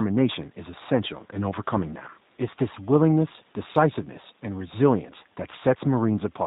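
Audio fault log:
Throughout, G.729 codec damage. The speech is band-limited, with nothing above 4 kHz, so it sounds muffled and boxy. Each 10 ms frame is rebuilt from a vocal tract filter, a pitch estimate and a few pulses, not from the real waveform. That leaves voiced sounds plainly rough and slightly synthetic. The faint room noise, about 35 dB below the speech, warbles as the codec models it. The damage fits an 8 kbit/s G.729A stream.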